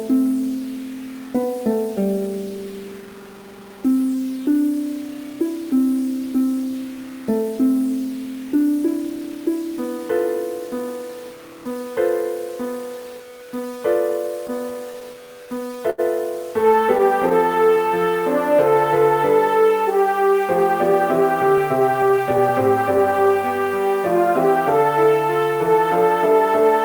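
Throughout the clip the sound has a grainy, signal-following grit that thickens on quiet passages, with the faintest parts sputtering or dropping out. This points to low bit depth without dither. The likely cause is truncation to about 6 bits, leaving a quantisation error roughly 25 dB below the signal.

From 14.47 to 16.00 s there are repeated stalls (stutter). Late packets drained the jitter buffer over and over, and each time the receiver stretched the last sound to fill the wait. The fills total 204 ms, or 13% of the stretch, with the longest at 82 ms. Nothing is lost, but the audio drags and hitches.

Between 16.76 and 17.32 s come scattered short gaps: a few isolated packets went missing or arrived late, and each hole, none longer than about 10 ms, was patched by continuing the previous sound. The result is brief ticks and smears rather than any audible loss of material.

Overlapping this, from 16.80 to 18.75 s, is a jitter buffer slow-down. 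The receiver rebuilt its reserve by repeating individual pitch periods and bits of pauses, adding 134 ms. Playback runs at 94% speed with unchanged pitch, so sounds are drawn out.

From 20.92 to 23.67 s a jitter buffer speed-up sets in. With more audio queued than its target, the receiver trimmed short pitch-period segments, removing about a fifth of a second in total. Playback runs at 107% speed at the same pitch and sounds noticeably hurried.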